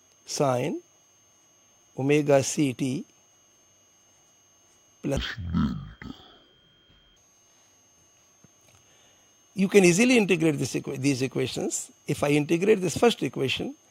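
Stereo read as mono, 5.17 to 7.17 s: left and right samples run together as one channel, so it plays at half speed, an octave low.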